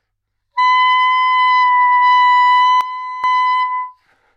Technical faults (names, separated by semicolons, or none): sudden gain jump